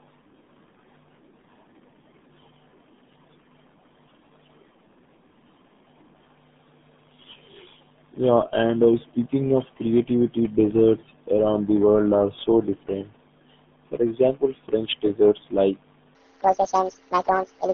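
Throughout, the speech carries RealAudio 14.4 codec damage: heavy, gargly and muffled, confined to about 150 Hz–3.6 kHz with nothing above 4 kHz, consistent with an 8 kbit/s dial-up speech codec. From 16.15 s to the end, just after "desserts like", a section at the wrong speed runs 1.79 times fast, raising pitch nearly ten semitones, likely from playback against a mismatched clock.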